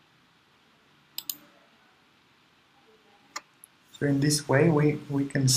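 No technical faults can be heard at any point in the audio, so there is nothing to describe in time order.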